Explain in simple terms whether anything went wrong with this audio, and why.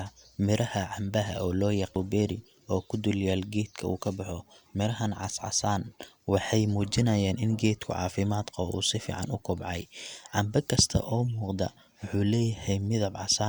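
Something did go wrong, briefly: at 0.59 s, just before "cambaha oo loo yaqo", there is a bit error spike. A single stored bit flipped, so one sample jumped to a wrong value and snapped back, producing one sharp tick unrelated to the speech.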